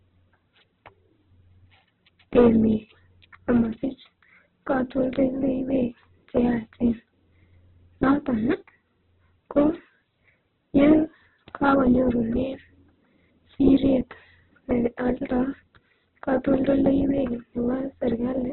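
Throughout the speech, nothing sounds above 4.1 kHz, and tones turn grainy and rough rather than swirling, which points to likely Opus compression at a very low rate, near 8 kbps. Hard clipping flattens peaks at 2.36–2.49 s (about 6 dB over), 9.57–9.64 s (about 2 dB), 10.78–10.95 s, 11.64–11.79 s and 13.51–13.93 s (about 4 dB each), adding sudden crackling fuzz that is confined to these loud moments, unlike the steady codec grit.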